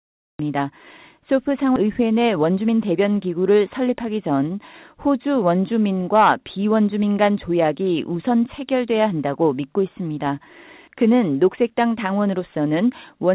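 Audio is present from 0.39 s, preceded by digital silence, and it enters in the middle of a sound. This is a cut-off start: capture or streaming began late, so the first part of the sound is missing. What distinguishes it from a slow fade-in or a quiet opening is the abrupt step from silence into speech, with no natural attack.

At 1.76–1.78 s there is a skip ahead. About 0.7 s of speech was discarded, either in transit or when an overfull jitter buffer dropped audio while later packets were already queued, so playback lurches forward. Nothing fills the gap, and the two sides are joined almost directly. Unlike a dropout, it leaves no silence or concealment noise, only a sudden discontinuity in the speech.

From 1.86 s to 2.93 s a jitter buffer speed-up follows. The buffer was still holding more audio than its target, so the receiver removed short pitch-period-sized pieces many times in a row to reduce the delay. 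In total it removed roughly a tenth of a second, and the speech runs at about 109% speed. The pitch is unchanged, which separates this from a sample-rate error. The speech just sounds briefly hurried.

All of this passes through the call path, where nothing above 4 kHz is present, which fits a G.711 mu-law narrowband codec.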